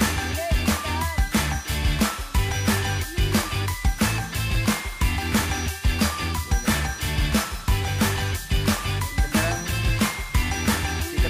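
No technical faults can be heard anywhere in the clip. Nothing in the audio points to a problem in how it was captured, processed or delivered.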